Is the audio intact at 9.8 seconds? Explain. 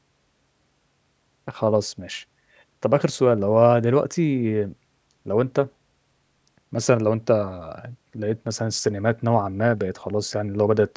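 Yes, the audio at 9.8 seconds is intact, with nothing there to suggest a dropout, glitch or other fault.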